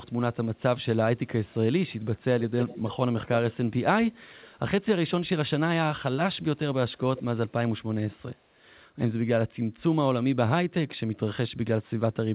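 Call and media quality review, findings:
Echo leak, likely far-end echo canceller letting loudspeaker pickup through: delayed speech copy about 0.3 s behind, at 0.56–0.85 s (very faint), 1.87–3.56 s and 7.16–7.23 s (fairly strong), 4.16–4.57 s (faint).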